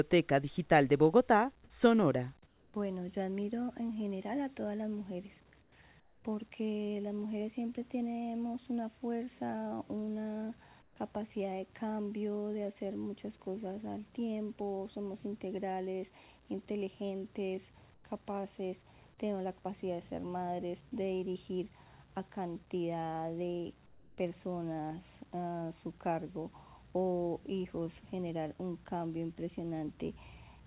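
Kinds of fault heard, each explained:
Comfort noise in place of the background: in six brief pauses, at 2.46, 5.62, 6.0, 10.82, 17.94 and 23.86 s, each 100 to 320 ms long, the real background gives way to a flat, featureless hiss about 5 to 9 dB quieter. That background already sits about 26 to 31 dB below the loud passages. The likely cause is discontinuous transmission with synthesized fill. Unlike a dropout or a noise gate, the gap never falls to true silence; the substitute noise simply lacks the original's texture.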